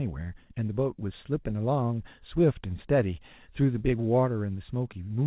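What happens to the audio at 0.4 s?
Nothing goes wrong at 0.4 s; the speech there is intact, carried through the call path with its narrow telephone bandwidth, with nothing above 4 kHz, which fits a G.711 mu-law codec at 64 kbps.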